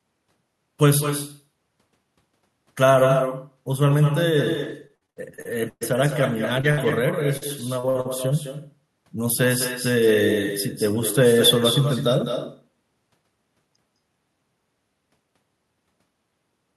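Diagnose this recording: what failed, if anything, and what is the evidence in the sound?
Echo with no canceller is a call-processing failure. Throughout, the speech is shadowed by a thinner copy arriving about a fifth of a second later and about 8 dB quieter. The far end's loudspeaker feeds its microphone unchecked. Unlike room reverberation, the copy is a distinct delayed repeat, not a smooth decay.

Repeated packet loss (robotic sound) is a network fault. From 4.63 to 8.07 s, a dozen or so short holes, the longest 120 ms, are patched by stretching the previous sound, giving choppy speech. Unlike a low-bitrate codec, the damage is confined to this burst and comes in discrete gaps.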